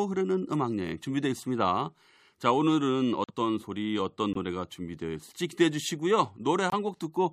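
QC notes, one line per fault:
3.24–3.31 s, 4.33–4.37 s, 6.70–6.74 s: corrupt frame muted. The decoder rejected damaged frames and inserted silence, giving abrupt 65, 42 and 36 ms holes with timing intact.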